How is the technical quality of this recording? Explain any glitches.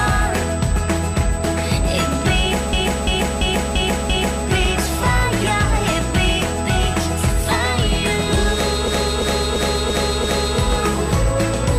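The quality is poor. Two faults are present: a constant high whine and two stretches where the audio locks into a repeating loop.

USB whine runs through the whole clip. It is a fixed tone at 8 kHz, sitting around 20 dB below the programme. The USB bus switches current in 125-microsecond microframes, which is 8 kHz. That current leaks into the audio through shared power or ground. The result is a thin, steady, high-pitched whistle under everything.

A system hang loop occurs twice, from 2.73 to 4.44 s and again from 8.88 to 10.58 s. Each time, a 341 ms slice of sound repeats exactly, five times over, at about 2.9 repeats per second. The computer or driver stalled, but the sound hardware kept replaying the same ring buffer. That length points to a 16,384-sample buffer. It is heard as a rhythmic, mechanical stutter.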